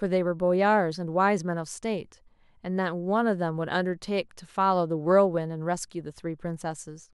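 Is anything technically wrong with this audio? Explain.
No, nothing technically wrong can be heard here.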